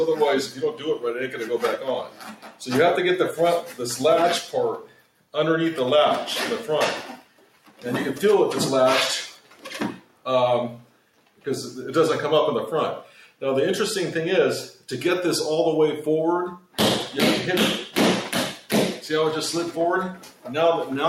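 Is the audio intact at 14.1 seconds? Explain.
No. A noise suppressor applied to music or sounds runs throughout, mistaking steady tones and tails for noise; level swings of around 10 dB show as a pumping waveform envelope. Between 13.04 and 14.88 s, sound cut by the noise suppressor sinks by up to about 12 dB for roughly half a second in total, visible as dimmed, shortened spectrogram decays.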